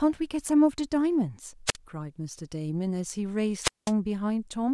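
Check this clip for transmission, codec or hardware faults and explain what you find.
Two wireless microphone squelch dropouts, at 1.66–1.76 s and 3.61–3.92 s: the FM radio signal fades, the receiver's squelch mutes, and a hiss burst precedes near-silent gaps of about 50 and 195 ms.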